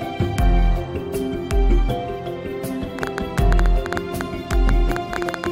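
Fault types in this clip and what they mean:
Train of clicks: Something, likely interference from nearby equipment or a faulty connection or power supply, keeps injecting short pulses into the signal from 2.99 s to 5.47 s. That puts around twenty near-identical clicks over the sound at about 8.9 per second, spaced unevenly rather than on a steady beat. They stand well above the level of the sound itself, so they come through as a sharp, irregular ticking that carries straight over quieter moments.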